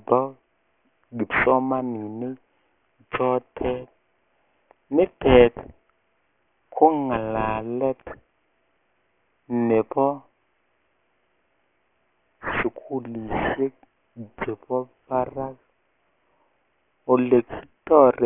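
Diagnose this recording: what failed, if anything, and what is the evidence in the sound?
Aliasing, present from start to finish, at the sample-format conversion stage. The speech is cut off hard at 3 kHz. Sibilants come through gritty and metallic. They sit at wrong pitches below that edge instead of above it. The folded energy is loud, roughly 10 dB under the speech itself. The rate was lowered without an anti-alias filter, so content above 3 kHz mirrored back down. This points to a drop from 48 kHz to 6 kHz.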